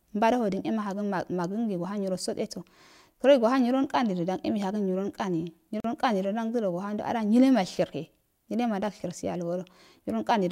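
Speech clip with a gap at a join of encoded pieces: a 42 ms gap at 5.80–5.84 s. Separately encoded pieces were joined without trimming encoder delay and padding, leaving smeared edges.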